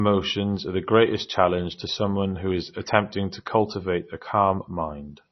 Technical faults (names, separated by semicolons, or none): MP3 compression